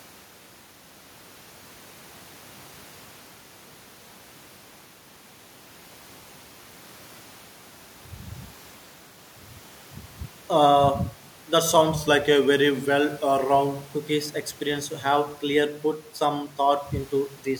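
From 11.94 to 13.95 s the speech slows by about 5.7% and drops roughly a semitone, about 101 cents, then snaps back to normal. Speed and pitch move together. This is likely a drift correction step, where clock-matching software briefly changed the playback rate to manage its buffer.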